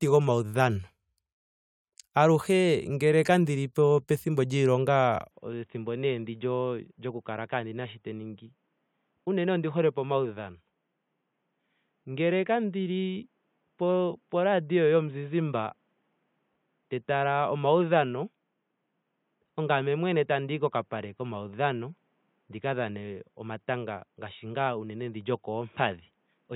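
Speech recording. From 5.31 s it turns dull and boxy, cut off above 3.8 kHz, about 5 dB quieter, with faint new noise. The likely cause is an input switched to a poorer device.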